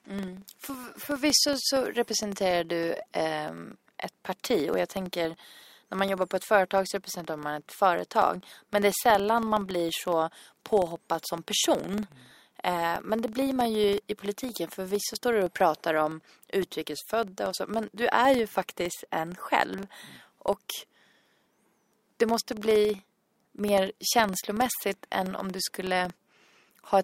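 Throughout the speech, a filter restarted on every block drops its stored state at each block boundary and begins again from silence. Each restart leaves a small transient, heard as a rough buzz at 21.5 Hz that rises and falls with the signal level, which fits a 2048-sample block.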